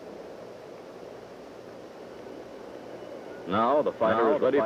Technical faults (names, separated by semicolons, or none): doubled audio track